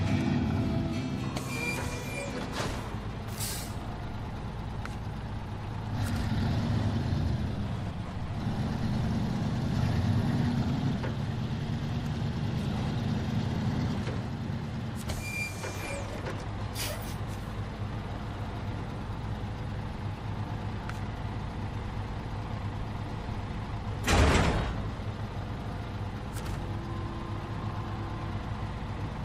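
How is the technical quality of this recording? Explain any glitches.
No glitches can be heard anywhere in the recording. There is nothing in it to explain.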